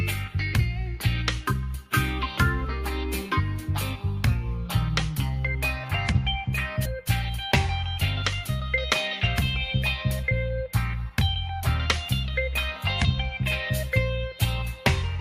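At 6.85 s, a skip ahead: roughly 0.4 s of audio was dropped in transit or at the jitter buffer, so the sound jumps forward abruptly without any gap.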